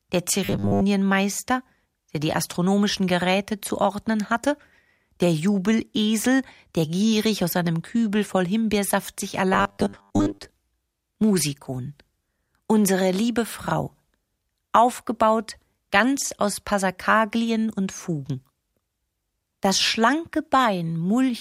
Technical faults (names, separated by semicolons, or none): robotic sound from repeated short buffers